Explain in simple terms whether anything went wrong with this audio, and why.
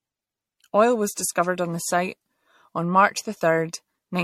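Something did go wrong here: the speech has a swirly, hollow, smeared quality from start to finish, with word onsets blurred. That's generation loss, likely from being squeezed through MP3 around seven times over, each pass adding fresh damage. The top end is also missing, with nothing above about 16 kHz.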